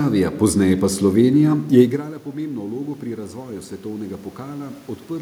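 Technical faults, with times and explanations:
1.69–4.85 s, automatic gain rising: the gain control slowly added about 5 dB after the talker moved back, so voice and room noise swell together.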